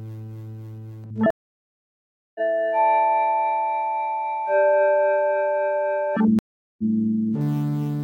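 A stream reconnect happens twice in this recording of sounds: the connection dropped and a fresh decoder restarted mid-stream. Silence runs 1045 ms from 1.30 to 2.40 s and 395 ms from 6.39 to 6.83 s, and each time the audio resumes further along, roughly 0.7 s and 0.4 s later.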